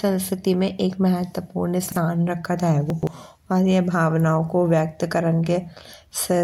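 Chunks out of order at 1.88 to 1.96 s and 2.90 to 3.07 s: segments of speech, which fit 43 ms chunks, play after the audio that should follow them, jumbling the sound.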